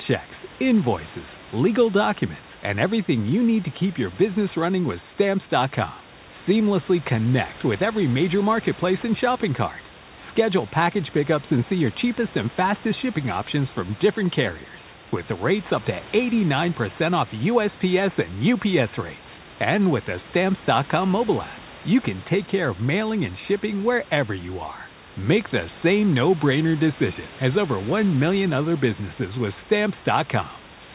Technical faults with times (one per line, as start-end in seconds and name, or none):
none